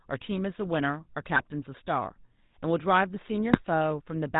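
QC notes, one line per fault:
throughout: GSM full-rate codec. The speech carries the plainly audible buzzy, gravelly roughness of the original GSM coder, which fits a 13 kbps full-rate stream. The codec rebuilds the voice from a vocal-tract filter excited by a sparse, regularly spaced pulse train, so fine detail in the excitation is lost and comes back as a rasping texture. Nothing above 4 kHz survives, which leaves the sound dull and band-limited.
1.36–1.43 s and 3.52–3.58 s: GSM bit errors. Two short bursts of squawking, popping disturbance break into the speech, the first spanning about 70 ms and the second a brief single blip of roughly 60 ms. Corrupted bits arriving at the decoder scramble the filter, pitch and gain parameters, so for those moments the spectrum is bent out of shape and the level jumps. The first burst sounds longer than the second, suggesting several consecutive frames were hit there.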